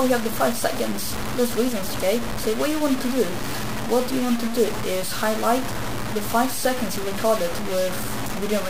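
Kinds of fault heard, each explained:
Low bit depth without dither: grainy distortion sits almost as loud as the sound itself and rises and falls with it, likely from truncation to about 4 bits. On the waveform, coarse staircase steps appear; the spectrogram shows broadband hash tracking the signal.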